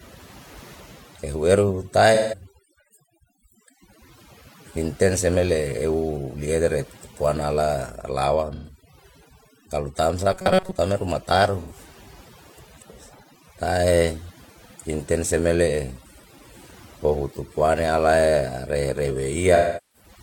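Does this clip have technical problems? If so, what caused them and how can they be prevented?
Yes. The audio is speech with three kinds of fault.

Overdone noise removal runs throughout. Bands near the noise estimate are cut away, leaving a lowered background that breaks up into twinkling specks. Unlike codec loss, this is constant rather than patchy. To prevent it, use a gentler reduction setting or capture cleaner audio at the source.

AAC frame loss with concealment appears at 2.14–2.46 s, 8.54–8.75 s, 11.61–11.73 s and 19.55–20.09 s. The decoder fills gaps of roughly 85 to 384 ms from the last good spectrum, producing smeared, noisy patches. Unlike the buzz, there is no steady pitch. To prevent it, use a more reliable transport or add error protection and retransmission.

Robotic sound from repeated short buffers occurs at 10.33–10.79 s. It is a rigid, metallic buzz at 188 Hz that still roughly follows the speech, likely because most of the audio was skipped while a buffer of about 5.3 ms was replayed. 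To prevent it, deliver audio promptly with adequate buffering and scheduling priority.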